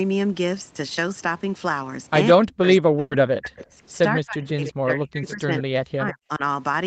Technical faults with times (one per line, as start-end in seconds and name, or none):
2.33-3.78 speech suppressed in double talk
2.99-3.14 burst of packet loss
4.13-6.42 speech suppressed in double talk
4.46-4.67 echo leak
5.28-5.33 echo leak